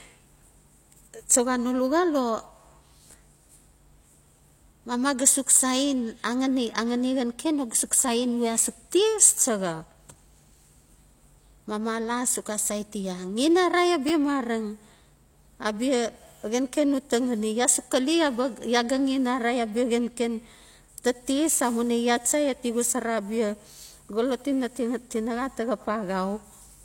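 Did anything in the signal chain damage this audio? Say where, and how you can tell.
Yes: chunks out of order at 14.08 to 14.10 s in this speech. A 10 ms buffer chunk plays one slot late, swapping adjacent segments and leaving a brief jumbled moment.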